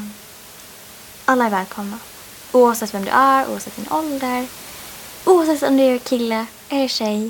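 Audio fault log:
The speech signal shows no technical faults, with only the room's own background noise sitting about 21 dB below it.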